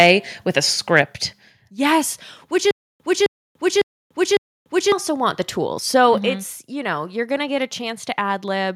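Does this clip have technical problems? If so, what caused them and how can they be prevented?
Yes. From 0.00 to 0.09 s there is microphone overload. The speech peaks run about 3 dB past full scale, and a small share of samples have flattened tops. That gives a harsh crackle. The likely cause is an input volume set too high. Lowering the microphone gain until peaks stay below full scale prevents it.

At 1.02 s the microphone volume steps down. Speech and background fall by about 5 dB at once. This likely comes from call software reducing the device input after that early distorted peak. Setting a safe input level beforehand, or disabling automatic gain adjustment, prevents the jump.

From 2.71 to 4.92 s there is a stutter with silent gaps. A 263 ms burst repeats four times, each followed by 290 ms of digital silence, every 553 ms. The audio meant for that span is lost. The likely cause is a stalled stream replaying its last fragment at each retry. 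A steadier connection or a larger playback buffer prevents it.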